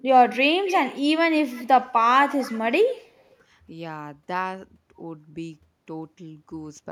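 Echo leak appears in four short bursts, at 0.65 to 0.99 s, 1.5 to 1.87 s, 2.3 to 2.6 s and 3.26 to 3.33 s. The speech is trailed by a faint copy 256 ms late, strongest in the first burst, weaker in the third and second, and barely audible in the last. This is likely a far-end echo canceller letting loudspeaker pickup through. Unlike room reverberation's smooth tail, it is a distinct, fixed-delay repeat.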